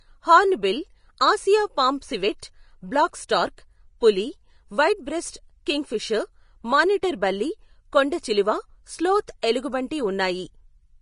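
Speech with plainly audible codec damage throughout: a hard cut-off with nothing above 10.5 kHz and grainy, hissy treble, likely Vorbis compression at a rate that fits roughly 30 kbps. Pre-echo occurs at 7.02 s and 9.42 s, where a short hiss leads sharp onsets by 11 ms and 13 ms, as block-spread quantisation noise fills the quiet gap before each attack.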